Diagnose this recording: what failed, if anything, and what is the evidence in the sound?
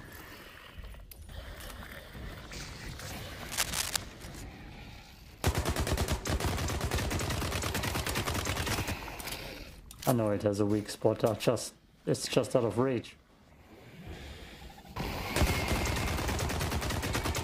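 Cable scratch noise, in the analogue wiring. From 3.49 to 3.97 s, uneven scratching bursts sit about as loud as the sound. A worn connector's shifting contact resistance is the likely cause.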